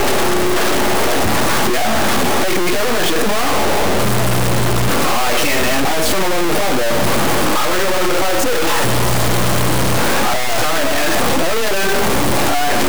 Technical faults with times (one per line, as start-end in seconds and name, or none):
0.00-12.89 stuck bit